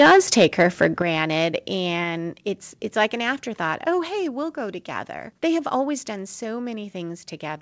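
The microphone input gain was likely set too high from the start: from 0.00 to 0.86 s the speech drives about 9 dB past the converter's limit, so a fair share of the peaks are flattened. This microphone overload gives the loudest syllables a harsh, crackling, buzzy edge.

At 1.02 s the call software likely reacted to that clipping by cutting the microphone volume in a single step of about 8 dB. The voice and background drop together at once, an abrupt change in loudness heard through the G.722 call path's 8 kHz bandwidth.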